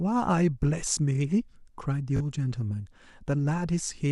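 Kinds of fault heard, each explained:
Bluetooth stutter: Audio packets on the wireless link arrived late or not at all, so the receiver filled the gap by replaying the last short slice of speech it still held. From 2.17 to 2.21 s this repetition makes a brief buzzy judder covering about 37 ms of lost audio, which fits two dropped packets. The speech then resumes further along, as though it had kept playing through the gap rather than pausing.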